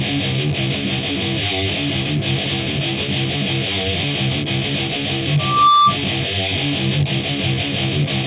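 From 4.46 to 4.96 s the audio plays at about 110% speed with its pitch unchanged, the mark of a jitter buffer speed-up. The receiver's buffer held more audio than its target, so it trimmed short pitch-period-sized pieces, one after another, around 70 ms in all, to catch up. The passage sounds hurried. On a waveform, events sit closer together than before while each cycle keeps its length. On a spectrogram, events are squeezed in time while their frequency bands stay where they were.

At 5.39 s a loudspeaker feedback squeal starts: a microphone was picking up the loudspeaker it fed, and at 1.2 kHz the loop gain rose above one. That single tone grows over about a third of a second to roughly 5 dB above the sound, then stops at 5.97 s. A spectrogram shows one bright horizontal line at 1.2 kHz, thickening as it builds. The waveform envelope swells into a dense, steady oscillation. Nothing in the clip reaches above 4 kHz, which fits the G.711 mu-law call path.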